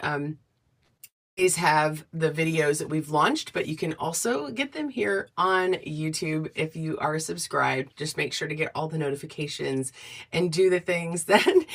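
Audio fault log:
0.83 to 0.93 s, burst of packet loss: Around 40 ms of audio never made it through, so the receiver stretched the last bit of sound it had for roughly 46 ms and let it fade out instead of leaving a hole. You hear a short held, dimming tail where the real sound should be. When the audio picks back up it has skipped ahead a touch, with about 7 ms dropped to catch up.
0.97 to 1.01 s, short concealed packet loss: A 20 ms chunk went missing right after the first hit, and the decoder papered over it by extending the preceding sound for 20 ms and blending back into the real signal. It's tiny, more a quick smear or wobble than a gap, but if something brief and sharp sat in that slot, it's gone.
1.07 to 1.39 s, long network dropout: About 300 ms of audio is simply absent. The gap opens with a brief continuation of the last sound that fades away quickly, and then about 0.27 s of silence follows until the audio returns further along with that stretch missing. 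The length and the fade into silence point to the stream likely stalling on the network side rather than anything in the recording itself.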